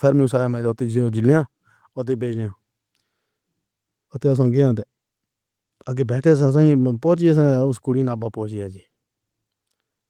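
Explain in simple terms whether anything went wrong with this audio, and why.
Nothing went wrong here; the speech comes across steady and intact, with no dropouts, glitches or other problems to point to anywhere along the way.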